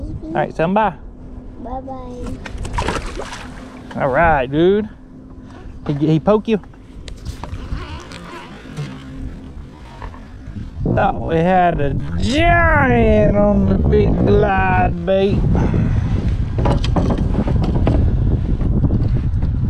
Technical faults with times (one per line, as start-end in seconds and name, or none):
7.80-15.20 time-stretched section